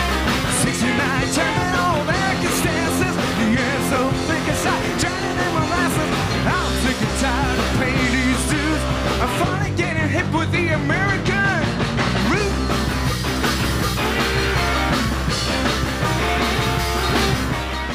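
Nothing in the recording stood out as a technical problem on listening.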